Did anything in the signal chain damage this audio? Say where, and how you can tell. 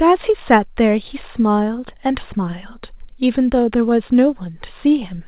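No, nothing in the signal chain damaged this audio.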